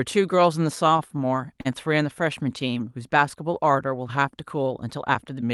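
A speech clip with repeated stalls (stutter) between 0.75 and 1.67 s. The jitter buffer ran dry nine times as packets arrived late. Each time the receiver stretched the last sound, filling about 116 ms in all, the longest gap 37 ms. Nothing is lost, but the speech drags and stutters. It travelled through an Opus call path, with the top end near 12 kHz.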